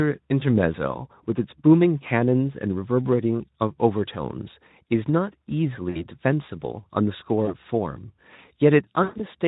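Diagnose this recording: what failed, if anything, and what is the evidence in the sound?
What failed is on the network side: VoIP packet loss concealed by the speech codec, a Speex stream at about 15 kbps with only light coding damage. There are dropouts at 0.39–0.44 s (a 20 ms gap), 5.89–6.05 s (60 ms), 7.45–7.54 s (20 ms) and 9.03–9.21 s, where 140 ms goes missing across 160 ms with one 120 ms stretch. The decoder fills each gap by repeating its last pitch and filter at falling gain, so you hear a buzzy, fading smear, and the speech stays thin for a moment after the packets return.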